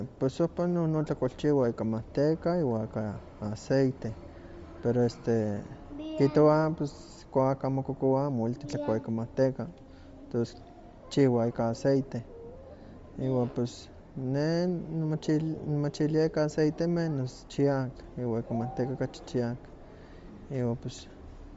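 Bluetooth LC3 compression, present throughout the speech, is the likely cause of plainly audible codec damage. Nothing survives above 7.7 kHz. The coder, seemingly working in 10 ms frames near 32 kbps, discards upper-band detail and fills it with noise, leaving a grainy edge.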